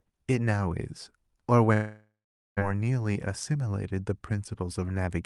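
From 1.73 to 2.59 s the speech breaks off. The last sound carries on as a fading buzz, and then there is about 0.43 s of silence. When the speech resumes, roughly 0.84 s of it is simply gone. This is most likely a long network dropout: packets stopped arriving, and the receiver concealed the gap by extending the final sound before giving up. Around the gap, the audio stays limited to about 12 kHz, as the call codec does.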